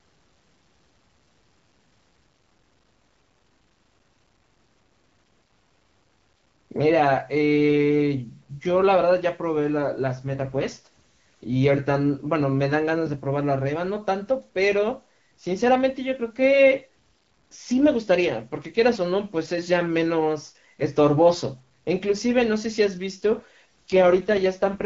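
At 10.16 s the speech turns rougher and more synthetic. This is an AMR rate drop. The network has pushed the wideband codec down to a lower mode to spend more bits on error protection. The roughness fits a fall from 12.65 to 6.6 kbit/s. The band stays the same and nothing drops out. Clarity returns at 11.56 s. The same rasp comes back at 23.90 s and lasts to the end of the clip.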